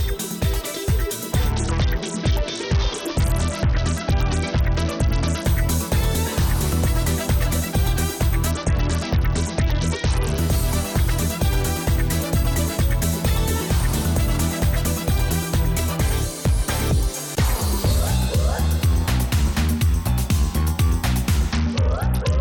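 Three Bluetooth SBC bit pool drops occur, at 1.50 to 5.45 s, 8.51 to 10.38 s, and 21.53 s to the end. Each time the treble dulls and gritty noise rises. This fits the encoder sharply cutting its bit allocation, to roughly 66 kbps, which starves the upper sub-bands and coarsens the rest.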